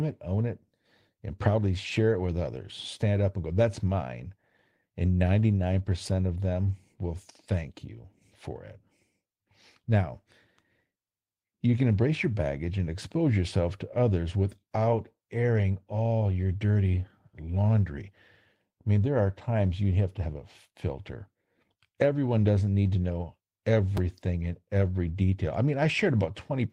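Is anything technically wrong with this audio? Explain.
Yes. At 23.97 s the speech has a click or brief buzz, a repeated buffer: new audio arrived late, so one 5 ms piece played again with hard joins.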